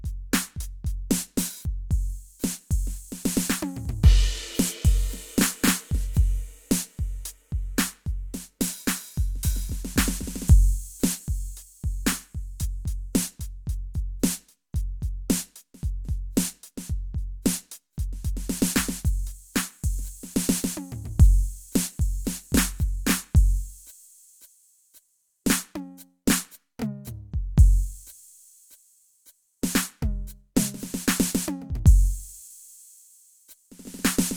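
Listening to the music from beginning to end, nothing stood out as a technical problem.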